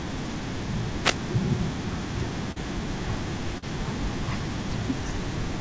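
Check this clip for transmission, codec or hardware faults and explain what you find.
Three faults can be heard in this speech clip. It comes through a call path that passes nothing above 8 kHz, which fits G.722 coding.

Wireless microphone noise hit, 1.01 to 1.18 s: the microphone's radio signal fades as reflections cancel, so receiver noise rises into a short swish of static over the speech.

Short concealed packet loss, 2.52 to 2.58 s and 3.58 to 3.64 s: 40 ms of audio went missing each time. The decoder extended the preceding sound and blended back, leaving a brief smear.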